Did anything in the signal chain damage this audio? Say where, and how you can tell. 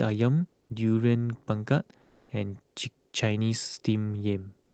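Yes, codec stage: comfort noise replaces the background at 2.05–2.29 s and 4.63–4.74 s, likely from Opus DTX; spectrogram texture turns smooth and featureless.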